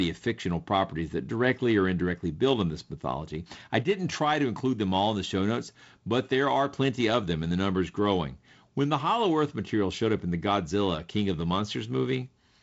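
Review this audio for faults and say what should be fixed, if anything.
No faults found; nothing here needs fixing.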